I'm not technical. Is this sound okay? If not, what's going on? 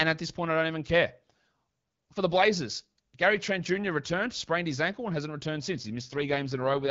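No. From about 5.72 s to the end at 6.90 s there's an AMR rate drop: the phone network switched the HD Voice call to a cheaper coding mode, so the voice turns rough and robotic. Unlike a dropout, there is no silence or gap.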